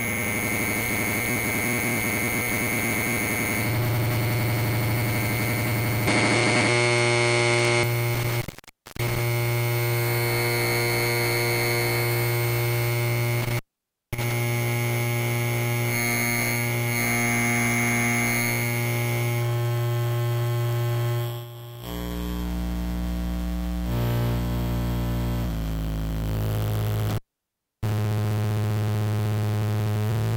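At 6.07 s the sound suddenly goes duller and a bit boxy. Everything above 10.5 kHz is gone, the level shifts by about 5 dB, and a new noise floor appears, sitting roughly 35 dB under the signal. There's no gap at the changeover. It clears up again at 7.83 s. That pattern is most likely an input switched to a poorer device: the recording briefly ran through a narrower-band mic with its own tone, gain and background noise.

Right after that comes an intermittent contact. From 8.14 s to 9.26 s the line drops out for about 0.58 s, with crackle at both edges and faint hiss underneath. It happens again from 13.40 s to 14.32 s, open for about 0.54 s, and once more from 27.10 s to 27.89 s, open for about 0.65 s. Each one sounds like a loose plug or cable momentarily breaking the connection and then reseating.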